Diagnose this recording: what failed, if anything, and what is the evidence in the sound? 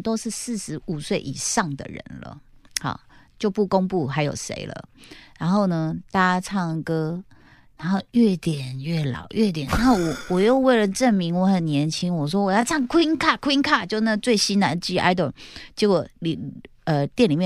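From 5.77 s to 13.25 s the speech abruptly slows to about 0.73 times its pace with the pitch unchanged, so it drags. That's a time-stretched section, likely processing software stretching audio to a length by repeating short slices.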